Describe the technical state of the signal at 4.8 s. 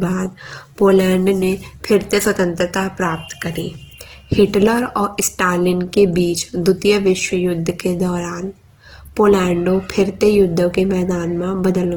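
At 4.8 s the speech carries Opus compression damage, present throughout the clip. It sounds grainy and rough, likely from CELT mode filling starved bands with folded or noise content at a low rate near 16 kbps. A spectrogram shows few holes, but smeared, noisy texture up to about 20.2 kHz.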